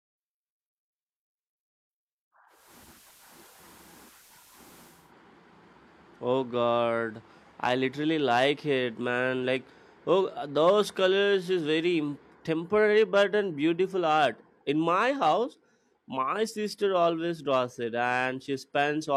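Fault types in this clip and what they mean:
Digital radio blending to analogue: the receiver lost its digital stream and cross-faded over about 0.3 s to the station's FM broadcast, returning at 5.13 s. From 2.47 s the speech carries a hiss roughly 30 dB down, and the level shifts by about 1 dB.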